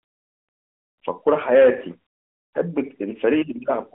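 Nothing goes wrong anywhere in this bit of speech, so there's no fault to point to at any moment along the way.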